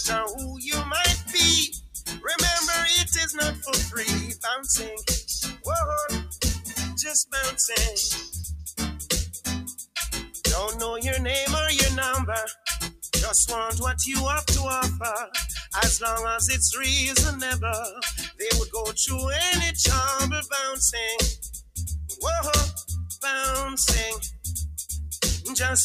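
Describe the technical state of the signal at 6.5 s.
At 6.5 s the sound is being cut by the noise suppressor, within a span from 6.21 to 7.34 s. The suppressor mistakes this sound for noise and pulls it down by up to about 18 dB, so it sinks for around 0.7 s in total. Throughout the clip, a noise suppressor designed for speech is also left running on music or other sounds. It keeps treating steady tones and ambience as noise, so the level swings by roughly 10 dB. Attacks pass while held parts and reverb fade away, giving a pumping, thinned-out quality around this moment.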